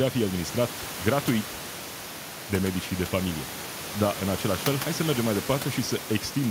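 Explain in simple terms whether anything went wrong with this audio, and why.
Nothing went wrong with the recording or its playback: the speech stays steady and intact throughout, and the faint background noise you may notice sits well beneath the voice and comes from the room the microphone was in, not from any problem with the equipment.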